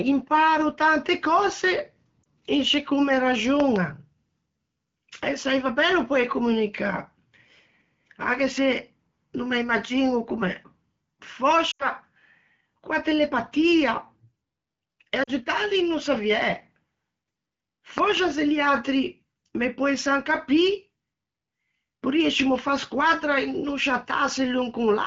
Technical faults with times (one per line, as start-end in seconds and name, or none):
2.23-2.27 lost AMR speech frames
3.60-3.78 loud pop
11.71-11.87 lost AMR speech frames
15.23-15.30 lost AMR speech frames
17.98-18.19 loud pop